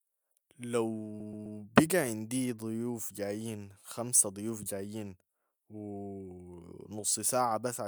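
From 1.19 to 1.58 s the speech stutters: the same 128 ms fragment plays again three extra times in a row. This is repeated frames. A short run of compressed frames, about a block of 128 ms, was written or delivered more than once, so the decoder simply played it again. The repeats make the speech about 384 ms longer than it should be.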